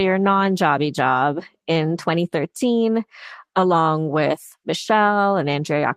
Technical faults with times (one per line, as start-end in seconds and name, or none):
none